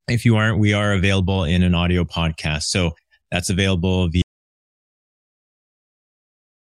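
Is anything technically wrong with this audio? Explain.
Yes. At 4.22 s, just after "that's available", the speech stops dead and the rest is silence. No room tone remains. This is an audio dropout to silence. The input was likely lost while recording continued, writing silence to the end.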